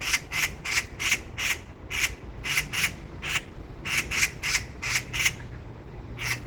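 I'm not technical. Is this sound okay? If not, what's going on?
No. Opus compression damage runs through the whole clip, from start to finish. It sounds rough, grainy and hoarse, with clean tones turned noisy. This is likely a squeezed Opus file. When the encoder is short of data, it stops storing every detail and fills the gaps with copied or invented noise. Here it has also switched to a blended speech-style mode, which adds a muffled, husky quality to everyday sounds.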